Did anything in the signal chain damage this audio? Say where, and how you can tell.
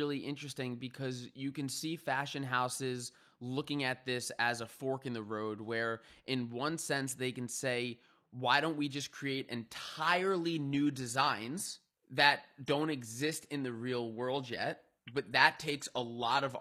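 Yes, at the network and codec stage: an adaptive stream at a lower bitrate cuts in at 8.89 s, after "say why don't we", and lasts to the end. The treble turns synthetic with no gap, fitting a drop from 96 kbit/s AAC to 24 kbit/s HE-AAC. On a spectrogram, the upper band abruptly turns blocky and copied.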